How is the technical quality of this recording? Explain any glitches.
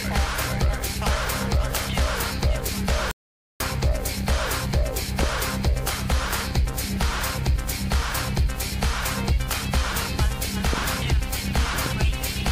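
Three glitches stand out: one playback stall and two loud pops near the end.

From 3.11 to 3.60 s there is a rebuffering stall. The player ran out of downloaded data and went silent for about half a second. It then resumed exactly where it stopped, with nothing lost.

A loud pop fault comes in two bursts. From 10.73 to 10.80 s a quick double pop sounds. From 11.86 to 11.88 s a single pop follows. Each peaks about 10 dB above the sound, which carries on underneath. A sudden voltage step, likely from a switch, plug, static or driver glitch, was added to the signal and shaped into a sharp thump.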